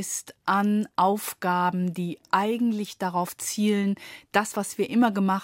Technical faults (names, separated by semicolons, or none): overlapping chunks